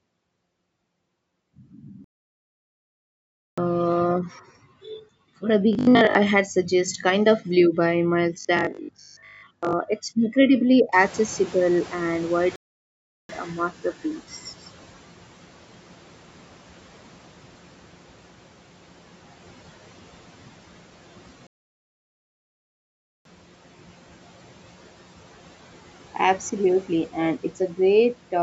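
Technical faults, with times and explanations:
2.04–3.58 s, 12.56–13.29 s and 21.47–23.25 s: playback stall. The sound cuts out mid-flow into silence three times, for about 1.5 s, 0.73 s and 1.8 s, then carries on. The likely cause is the player running dry of buffered data, or its output thread being blocked, so nothing reaches the output until it recovers. The second gap falls inside the stretch where the background noise has just risen.
5.73–6.15 s and 8.41–9.73 s: robotic sound from repeated short buffers. Just before "had suggest" and again before "it's incredibly", the speech becomes a rigid metallic buzz at 50 Hz that still loosely tracks the talking. The likely cause is fresh audio arriving too seldom, so the software loops the last 20 ms to fill the gap while most of the real audio, roughly 70%, is skipped. The loop length sets the fixed buzz pitch.
10.92–14.21 s: noise suppressor catching up. 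Right after "it's incredibly", the room noise jumps by about 24 dB, at roughly 11 s, to around 22 dB below the speech. The suppressor's noise estimate is still tuned to the quieter level, so the noise comes through with less reduction at first. Over about 3.3 s the estimate adapts and the noise sinks by about 11 dB. The noise itself belongs to the room, but the gradual fade is the suppressor lagging behind.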